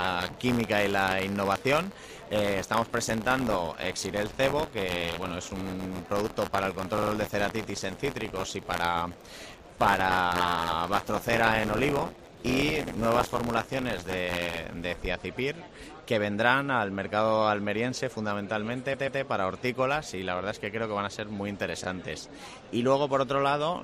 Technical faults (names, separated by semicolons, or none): buffer tearing; repeated frames